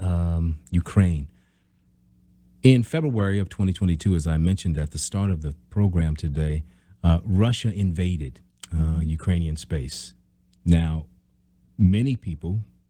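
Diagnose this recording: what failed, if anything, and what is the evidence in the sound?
Nothing in the speech points to a failure at any stage, so there's nothing here to diagnose.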